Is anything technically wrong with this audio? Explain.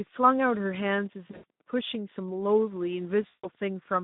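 Yes. Throughout, the speech carries Speex codec damage at a low rate, which fits roughly 11 kbps. With few bits for the excitation, the voice sounds hoarse and noisy within a phone band of about 150 Hz to 3.7 kHz. A spectrogram shows smeared harmonics and nothing above 3.7 kHz.

Between 1.28 and 1.44 s, and again from 3.27 to 3.49 s, VoIP packet loss concealed by the speech codec is heard. The decoder extends the last pitch and filter at falling gain, so the sound turns into a fading buzz. On the spectrogram this shows as flat, repeated harmonic bands, and the waveform envelope decays.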